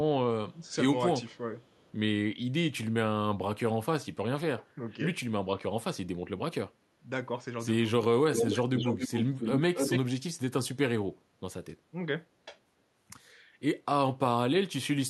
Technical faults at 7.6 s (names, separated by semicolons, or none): none